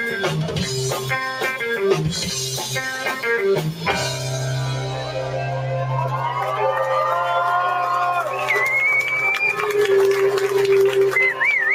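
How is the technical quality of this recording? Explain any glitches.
The recording has two audible processing faults, both from speech-oriented noise reduction. A noise suppressor applied to music or sounds is active throughout. It treats steady and fading content as noise, so levels swing by around 5 dB and the sound pumps and thins. Sound cut by the noise suppressor, 5.05 to 5.35 s: the suppressor misjudged this passage as noise and pulled it down by about 6 dB, briefly sinking it.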